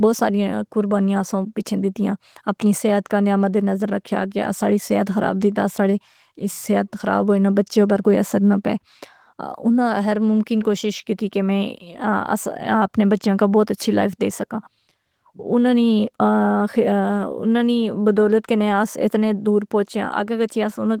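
Nothing goes wrong anywhere in the recording; the Opus voice compression running at about 20 kbps in its hybrid, full-band mode leaves only a light touch on the sound, with content reaching up to roughly 20 kHz.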